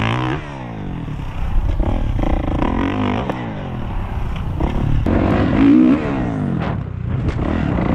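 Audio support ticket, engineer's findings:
Regular clicks, 1.32 to 7.30 s, repeating about every 1.99 s, four in all. Likely clock drift buffer slips: two independently clocked devices, a few hundred ppm apart, so the buffer periodically drops or repeats a few dozen samples.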